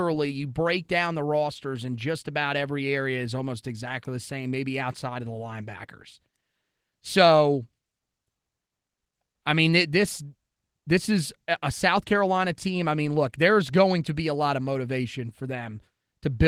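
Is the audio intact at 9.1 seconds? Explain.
Yes, the audio is intact at 9.1 seconds, with no fault at that moment beyond the light, steady coloration of the Opus voice compression running through the speech.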